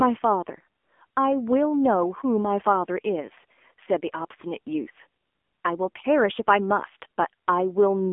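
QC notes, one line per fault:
Throughout, AMR narrowband mobile codec: the speech has been squeezed through a low-rate AMR-NB mobile path, which fits the 7.4 kbps mode, so nothing survives above 3.6 kHz and the line band sits at 250 Hz to 3.5 kHz. The result is a thin, boxed-in tone with a plainly audible buzzy, synthetic edge.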